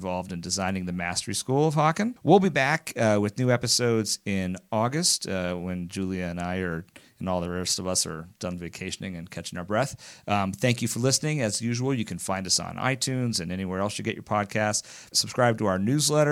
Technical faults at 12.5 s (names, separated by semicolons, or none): none